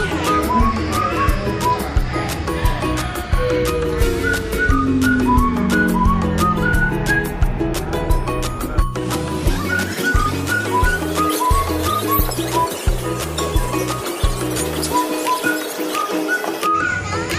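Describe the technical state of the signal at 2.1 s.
At 2.1 s the signal is intact, with no audible fault at that point.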